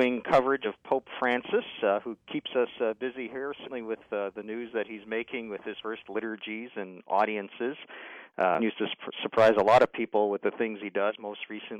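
Damaged data in a compressed stream appears five times: at 0.61 to 0.66 s, 3.63 to 3.69 s, 5.76 to 5.81 s, 8.55 to 8.60 s and 11.06 to 11.12 s. Each burst lasts roughly 50 to 65 ms. Corrupted bytes in the encoded stream leave the decoder unable to parse those frames, so it loses sync and hunts for the next valid header. Each event is a brief chirp, squawk, click or short hole cutting through the sound.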